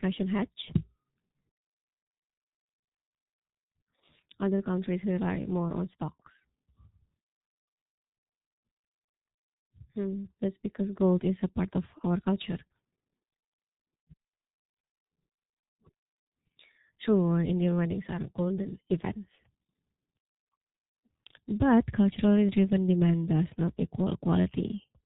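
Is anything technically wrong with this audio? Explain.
Yes. G.723.1 codec damage runs throughout the speech, which points to a rate around 6.3 kbit/s. Working in 30 ms frames, it drops everything above 4 kHz and tracks the voice slowly, so the speech is heavily muffled and hoarse, with smeared consonants.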